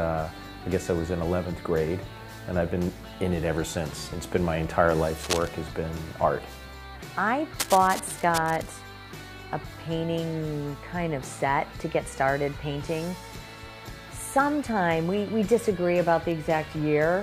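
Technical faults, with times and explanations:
5.20 to 5.48 s and 7.59 to 8.69 s, cable scratch noise: dense, uneven rustling sits over the sound, about 5 dB and then about 10 dB below it. It is likely a worn cable or connector being moved. Unlike steady crackle or isolated clicks, it comes in irregular, handling-like bursts.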